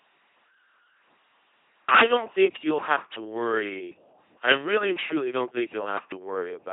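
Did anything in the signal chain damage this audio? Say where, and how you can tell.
Yes, the codec stage wrecked this speech, running right through the clip. It's an LPC-10 vocoder: a buzzy, mechanical robot voice, hiss where voicing flips wrong, nothing above about 3.9 kHz. Each frame drives a ten-pole filter with pulses or noise, which fits 2.4 kbit/s.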